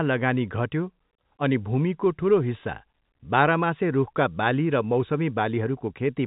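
Nothing stood out on listening to this speech clip, which comes through the telephone band with no audible content above about 3.8 kHz.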